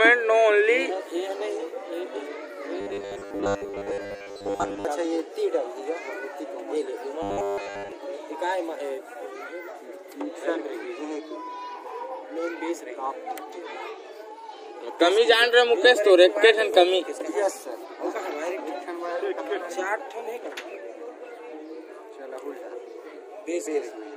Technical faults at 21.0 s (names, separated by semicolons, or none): none